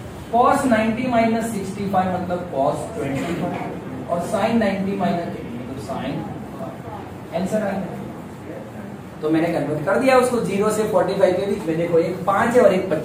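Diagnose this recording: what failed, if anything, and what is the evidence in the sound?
Nothing here failed: listening across the whole recording, there's no point where any stage of the chain gives itself away, so there's nothing to diagnose.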